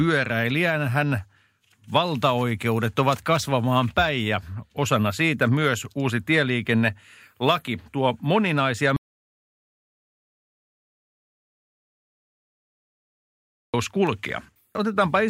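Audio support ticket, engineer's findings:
Audio dropout to silence, 8.96–13.74 s, right after "laki tuo moninaisia". Speech cuts mid-flow, about 4.8 s of silence, no room tone. Likely input loss or link failure, not a noise gate (no fade, floor vanishes entirely).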